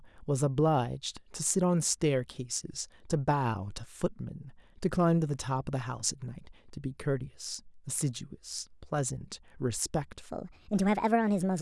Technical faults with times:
10.29-11.61 section at the wrong speed

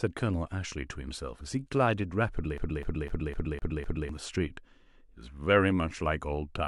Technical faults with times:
2.58-4.09 CD stuck on one turn

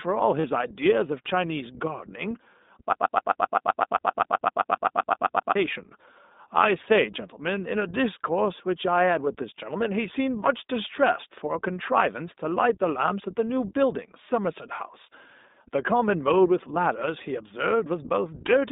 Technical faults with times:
0.00-18.72 iLBC codec
0.40-0.45 lost iLBC frames
2.93-5.55 broken-record loop

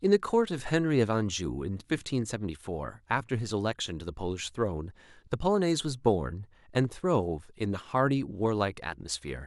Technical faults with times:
none

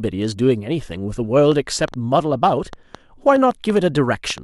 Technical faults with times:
1.52-4.39 train of clicks

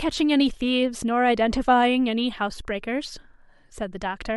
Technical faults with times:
none

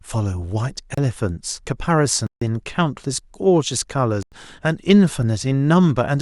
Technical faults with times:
0.94-0.98 block of digital silence
2.27-2.41 block of digital silence
4.23-4.32 block of digital silence

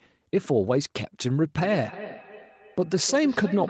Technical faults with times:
1.59-3.70 feedback echo between two devices

